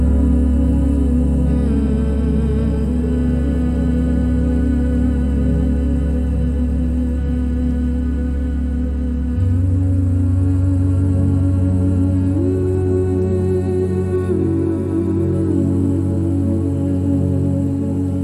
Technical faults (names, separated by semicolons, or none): none